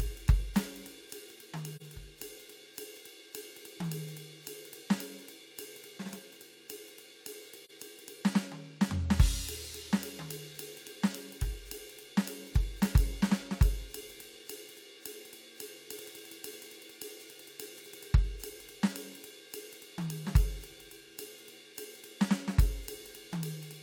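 AAC frame loss with muting occurs twice in the music, at 1.76 to 1.82 s and again at 7.65 to 7.71 s. Each time the decoder received nothing for one stretch of the stream and filled it with silence. The overlapping transform windows turn that silence into a smooth fade out and back in rather than a hard cut. The result is a brief soft-edged dropout, and its roughly 43 ms gap points to a single lost frame.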